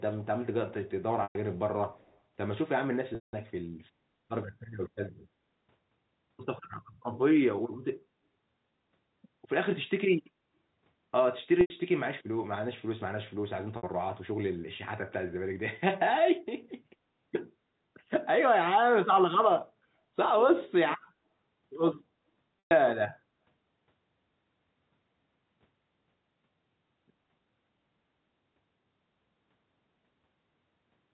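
Packet loss with pitch repetition first appears at 1.23 to 1.35 s and returns at 3.15 to 3.33 s, 11.61 to 11.70 s, 13.77 to 13.83 s and 22.61 to 22.71 s. The gaps are 120, 180, 90, 60 and 120 ms, which fits lost 30 ms packets. The receiver fills each hole by repeating the last pitch period. The shorter gaps sound like a briefly held, buzzy tone. The 180 ms gap fades toward silence before the speech cross-fades back. Because the frozen pitch stays steady, it is unlike a plain dropout, which is a hard silence.

Between 1.93 and 2.18 s there is an echo leak: a very faint copy of the speech, far below the direct sound, trails it by 132 ms. It is likely caused by a far-end loudspeaker whose echo canceller let some of its own playback back into the microphone. A room reflection would blur into the voice, but this is a distinct delayed repeat heard only in this short stretch.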